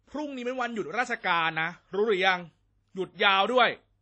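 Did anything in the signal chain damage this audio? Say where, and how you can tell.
Yes, at the codec: the speech rings and smears with hiss that breathes along, and nothing reaches above 8.7 kHz, likely WMA compression at a low bitrate near 32 kbps.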